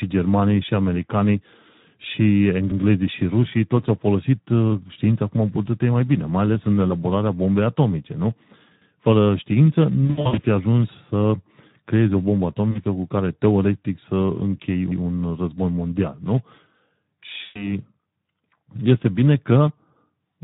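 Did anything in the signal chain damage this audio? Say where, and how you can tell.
Yes. At the codec stage, the Speex codec runs throughout at about 11 kbps. The speech sounds noisy and hoarse, with plainly audible codec damage. Too few bits reach the excitation.

Overlapping chunks point to a buffering stage. Stutters come at 2.71, 8.81 and 14.91 s, the last just before "război mondial nu". Each join repeats 100 ms. The spacing fits 6 s chunks that start before the previous one ends.

At the network stage, VoIP packet loss concealed by the speech codec shows at 10.05 to 10.40 s before "fi ajuns", at 12.71 to 12.82 s between "creezi o bombă" and "cu care teoretic", and at 17.43 to 17.72 s. Each gap is stretched into a buzzy tone or coloured noise that fades.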